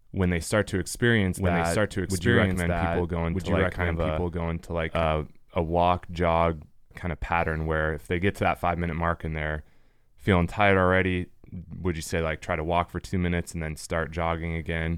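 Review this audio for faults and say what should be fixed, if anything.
A doubled audio track runs from 1.35 s to 5.03 s. A second full-band copy of the speech sits roughly one and a half seconds behind the original at about the same level. It carries no decay or room colouring, and it switches in and out abruptly at both ends. The likely cause is a second capture through a slower path, or two unaligned copies left stacked in the edit. To prevent this, route each source through a single capture path and check edits for duplicated regions before export.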